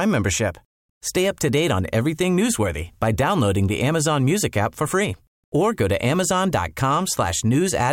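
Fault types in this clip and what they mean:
Clock slip clicks: faint regular ticks under half a second apart through the speech. Likely two unsynchronised clocks about 50 ppm apart, slipping single samples.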